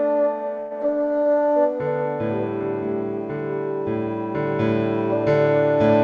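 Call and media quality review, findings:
Call audio freeze, 0.60–0.73 s: packet delivery stalled, likely jitter buffer underrun. The receiver extends the last music as a fading buzz or hiss for about 110 ms, with no dropout to silence. Playback then resumes where it stopped, so nothing is lost but everything after runs about 110 ms late.

Short concealed packet loss, 0.79–0.81 s: about 20 ms of audio missed the decoder. Concealment bridges the hole from the preceding sound and cross-fades back, heard as a brief smear or wobble in the music. Band-limited to 8 kHz throughout, consistent with a G.722 call path.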